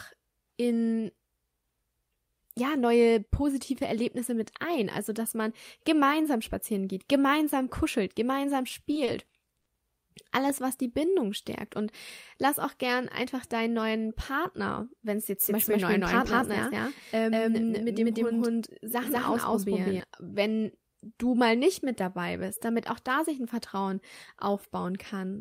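Speech with two faults. From 8.69 to 9.68 s, just after "geht gemeinsam kuschelt gemeinsam", the audio drags and stutters through six brief stalls of up to 60 ms, each patched by stretching the last sound. These repeated stalls (stutter) come from late packets repeatedly emptying the jitter buffer. From 15.42 to 20.0 s, after "wenn es", a doubled audio track runs a second, equally loud, dry copy about a fifth of a second behind, starting and stopping abruptly. It is likely from a slower second capture path or an edit holding two copies.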